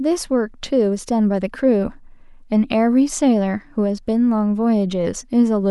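Across the whole recording the speech signal shows no audible technical faults.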